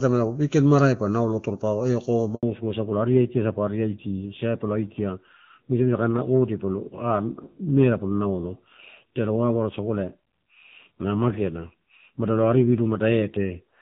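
At 2.35 s the call is handed from one network to another, and for about 80 ms no speech frames arrive while the link switches over. This handover gap sounds like the speech being snipped off: the sound fades within a few tens of milliseconds, leaves a short dead silence, and resumes at 2.43 s. Whatever was said in that 80 ms is lost.

From 2.43 s to the end, the call falls back to narrowband. Before the switch, the AMR wideband (HD Voice) codec carries the speech with its full top end, consistent with its highest rate. After the handover, the link comes back on the older narrowband AMR codec, which fits a low rate of around 7.4 kbit/s. Nothing above 4 kHz survives, so sibilants and breath lose their crispness and the speech turns duller, boxier and rougher for the rest of the clip.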